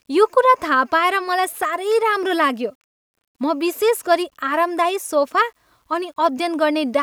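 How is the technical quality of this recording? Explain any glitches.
The technical quality is compromised by one fault throughout. From start to finish, the speech carries a grainy distortion that shifts with the signal, about 50 dB below it. Quiet passages sound gritty. The likely cause is low bit depth without dither: rounding to about 10 bits, with no noise added to decorrelate the error.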